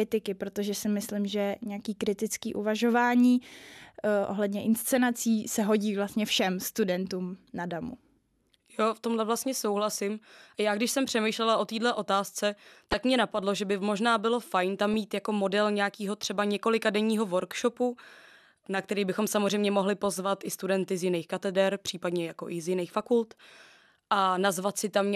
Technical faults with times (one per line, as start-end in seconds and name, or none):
12.91-12.94 corrupt frame decoded